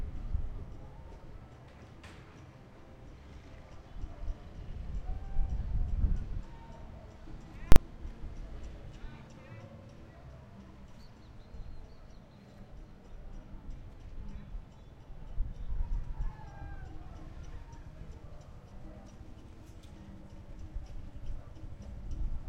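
At 7.72 s a single, very loud bang cuts through the sound, lasting about 40 ms until 7.76 s. This is invalid numbers at full scale: a calculation produced infinite or invalid values that were forced to maximum level for one short block, so the output pinned at one extreme value, far beyond the audio's peaks.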